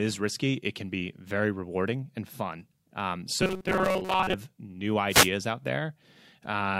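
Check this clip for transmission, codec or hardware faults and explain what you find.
Two faults are audible in this speech clip.

From 3.42 to 4.34 s, robotic sound with a rigid 188 Hz buzz, likely from repeated short buffers of about 5.3 ms filling gaps. Spectrogram shows evenly spaced fixed harmonics.

From 5.09 to 5.29 s, a wireless microphone noise hit: the radio signal fades, receiver noise rises into a static swish, seen as a broadband smear.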